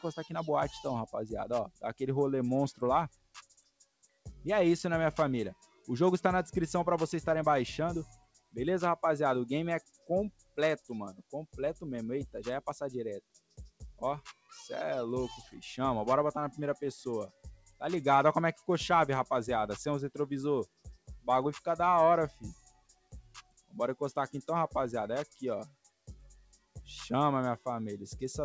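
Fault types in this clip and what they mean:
noise suppressor applied to music or sounds: A noise suppressor built for speech stays engaged for the whole clip and treats steady tones, ambience and reverberant tails as noise. The gain swings by roughly 10 dB, so the level pumps and sustained parts thin out while attacks pass. This differs from the call path's G.722 coding, which removes everything above 8 kHz at a constant level. The suppressor's loss rises and falls with the sound itself.
sound cut by the noise suppressor: These are specific stretches where the suppressor clamps down much harder than its background swing, at 1.67–5.88, 8.12–11.56, 13.21–15.57, 17.28–17.81, 20.66–23.75 and 25.30–27.66 s. The deepest dips reach about 21 dB, and about 16 dB in the short 17.28 s stretch. Only part of each span sinks, from under half a second to about two seconds. Unlike a dropout, sudden onsets still come through and the level sags on held or decaying sound.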